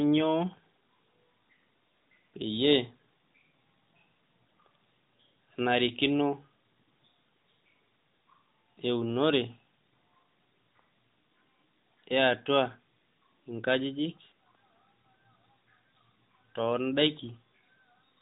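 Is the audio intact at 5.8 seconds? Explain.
Yes, the audio is intact at 5.8 seconds, without any dropout or glitch, carried as elsewhere by the AMR narrowband mobile codec that limits it to below 4 kHz.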